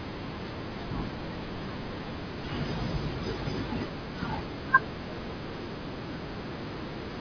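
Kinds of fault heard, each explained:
No technical faults can be heard in this speech recording. Nothing in the audio points to a problem in how it was captured or transmitted.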